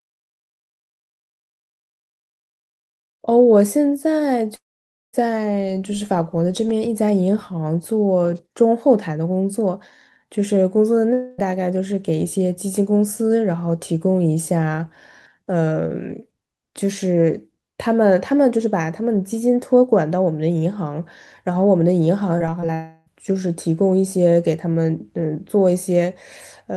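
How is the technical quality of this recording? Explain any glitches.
The recording has several audible glitches: a gritty opening fade, three stretches where the sound drops out or smears, and a brief choppy patch near the end.

Truncation distortion on a fade: From the start to about 3.21 s, the speech fades in smoothly, but its quiet early part sounds grainy, worst from 0.0 to 2.65 s. The fade stage kept too few bits and added no dither, which fits roughly 9-bit resolution. At low levels the waveform collapses into coarse steps, so the soft opening sounds gritty instead of rising cleanly.

Long network dropout: At 4.55 to 5.15 s the sound stops abruptly, and a fading buzz continues the last sound for a moment before about 0.53 s of silence. At 11.13 to 11.40 s and again at 22.74 to 23.08 s, a smeared, held tone stands in for the missing sound without falling silent. Each time, the speech resumes with the lost part gone. 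The likely cause is a stall in the network stream, with the receiver stretching out the last sound it had.

Repeated packet loss (robotic sound): From 22.38 to 22.70 s, just before the last dropout, the speech turns choppy. Four short holes, none longer than about 20 ms, were each patched by repeating the preceding sound. About a fifth of that stretch is filled-in audio, which leaves it choppy with pieces missing.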